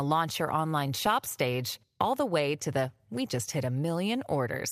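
Scattered short gaps affect this speech clip from 0.61 to 1.29 s, between "launch your" and "stage all". About five packets arrived late or were lost, and the receiver filled each hole by extending the preceding sound, roughly 50 ms in total. The longest gap is around 15 ms, heard as brief ticks and smears.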